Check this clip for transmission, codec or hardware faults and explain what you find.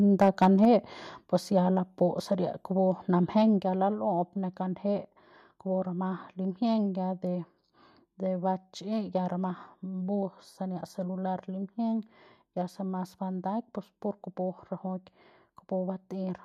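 Two related faults appear, both at the microphone input.

Microphone overload, 0.21 to 0.65 s: the input gain was likely set too high, pushing peaks about 4 dB past the converter's limit. A small share of samples have their tops flattened, giving the loudest syllables a harsh, crackling edge.

Microphone volume stepped down, at 0.65 s and 3.6 s: the speech and the background drop together, abruptly, by about 3 dB and then about 4 dB. This is likely the call software reacting to the microphone being too loud or clipping by cutting the device's input volume in single steps. The first drop comes right as the distortion ends.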